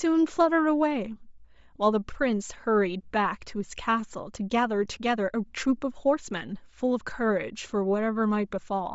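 From start to finish the speech has a breathy, grainy edge. The top of the spectrum sounds hollowed out and then filled back in with a hiss-like wash instead of real detail. That's plainly audible codec damage, most likely Bluetooth LC3 compression. At a low rate the encoder drops much of the upper band and substitutes noise. The character fits roughly 32 kbps with short 7.5 ms frames.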